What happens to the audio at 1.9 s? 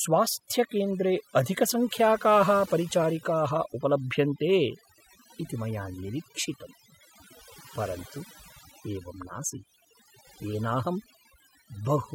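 At 1.9 s the speech is under overdone noise removal, which runs through the entire clip. The noise reducer is cutting individual frequency bands hard wherever they sit close to its noise estimate, taking quiet speech detail with them, so the background drops and breaks up into twinkling, warbling specks.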